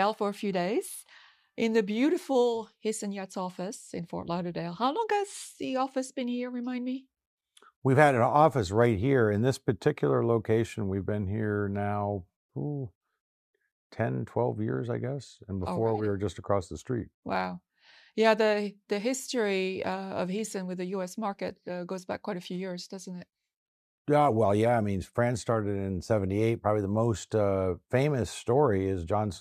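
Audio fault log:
No audible faults detected.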